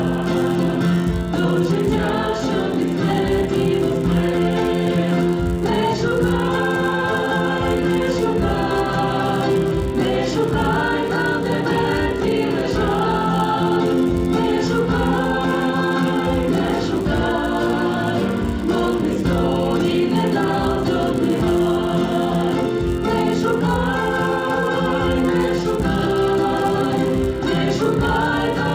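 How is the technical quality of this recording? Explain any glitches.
The recording has one persistent glitch: a resampler restarted on every block, present from start to finish. The converter treats each 10 ms block in isolation, so every block edge carries a small discontinuity, heard as a 100 Hz buzz that follows the signal. The sound suggests an upsampling step, possibly from 16 kHz to 48 kHz.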